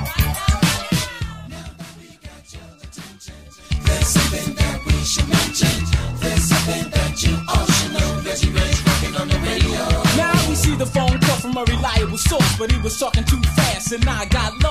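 A stretch of audio with zipper noise from 3.44 to 3.81 s: the level changes by roughly 20 dB in 3 dB jumps, about twenty a second, each one ticking audibly.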